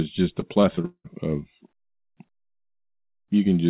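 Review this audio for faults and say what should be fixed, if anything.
Between 0.4 and 1.06 s the speech turns choppy and robotic, with repeated packet loss: six holes, the longest about 190 ms, each patched by stretching the previous sound, so around 42% of that span is concealment. It's band-limited to 4 kHz, which fits the G.711 call path. To prevent it, fix the network jitter and loss, for example with a deeper jitter buffer or FEC.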